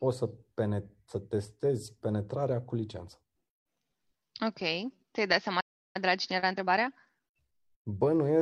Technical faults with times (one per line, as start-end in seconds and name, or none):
5.60-5.96 playback stall
5.96-8.24 time-compressed catch-up